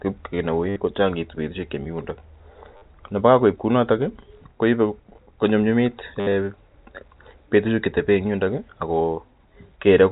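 Packet loss with last packet repeated occurs three times in this telephone-band speech. At 0.69 to 0.76 s, about 70 ms of audio never arrived, and the receiver replayed its last good packet to fill the gap. The same happens for 50 ms at 2.77 to 2.82 s. From 6.2 to 6.34 s, 110 ms of loss is scattered across 140 ms, with a longest run of 70 ms. The timing fits 10 ms packets. The runs buzz at about 100 Hz as a brief robotic stutter. Under it, the G.711 mu-law coding cuts everything above 4 kHz.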